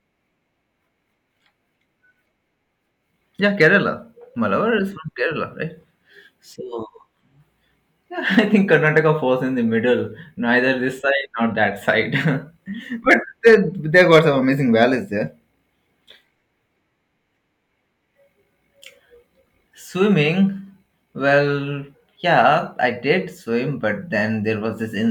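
Hard clipping hits this speech at four points: 3.61 to 3.67 s, 8.38 to 9.10 s just before "falls in the middle", 13.11 to 13.55 s, and 13.96 to 14.19 s ahead of "some amazing". Peaks overrun the stage's maximum by about 2 to 4 dB and are sliced flat, spraying high harmonics. The short first burst is a crackle; the longer runs crackle on their loud peaks.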